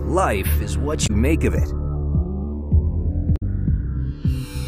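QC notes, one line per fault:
throughout: Channels drifting apart. The two channels run on slightly mismatched clocks, roughly 200 parts per million off. The delay between them creeps up to around 0.7 ms by the end. In mono, the shifting comb notches sweep slowly, giving a slow flanging.
1.03 to 1.10 s and 3.33 to 3.43 s: Damaged data in a compressed stream. Each burst is a short chirp or blip. The decoder hits corrupted frames, loses sync and hunts for the next valid header.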